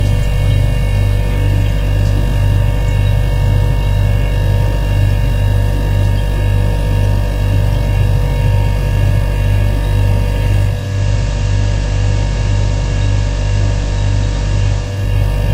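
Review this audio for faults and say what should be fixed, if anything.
A digital radio blending to analogue fault runs from 10.62 to 15.21 s. The receiver lost the digital stream and cross-faded over about 0.47 s to the FM broadcast. On a spectrogram, broadband hiss about 20 dB below the signal fills the background. The waveform drops by about 1 dB. Improving digital reception with a better antenna or placement, or forcing digital-only mode, would keep the receiver from falling back to FM.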